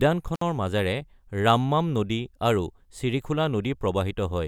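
At 0.35 s the speech drops out for about 59 ms, until 0.41 s. This is an intermittent contact: a loose connection briefly opens. Crackle marks both edges, with faint hiss between.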